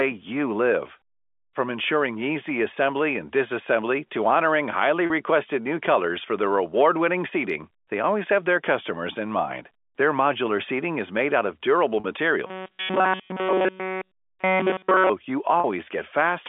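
Around 5.06 s, between "disassembly to honoring highly" and "new colors for their", there's a 40 ms packet loss with pitch repetition. The last pitch period gets looped to cover the gap, so you hear a brief held, buzzy blip, which fits two 20 ms packets going missing. The same thing happens at 12.00 s, right after "made out of durable".

From 12.47 to 15.09 s the speech turns into a rigid metallic buzz locked at 188 Hz, with essentially all of that stretch affected. That's robotic sound from repeated short buffers, likely caused by audio arriving too seldom so a roughly 5.3 ms chunk kept being replayed.

A third 40 ms pitch-repetition dropout follows at 15.60 s. Underneath it all, the G.711 A-law telephone band of 250 Hz to 3.5 kHz comes through with no more than faint codec damage.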